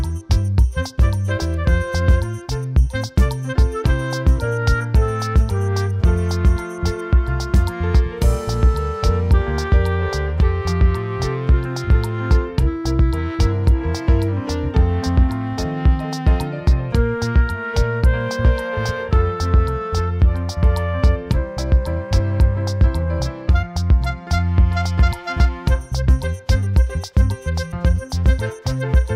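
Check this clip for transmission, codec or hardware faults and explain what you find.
One transmission fault appears, near the end. From 27.12 to 27.14 s there is an overlap between stream segments: the time stamps of adjacent 6-second segments overlapped, so the player discarded about 24 ms of real audio. The waveform jumps, producing a brief click or skip.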